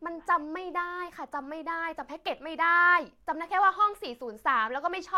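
No technical faults can be heard anywhere in this recording.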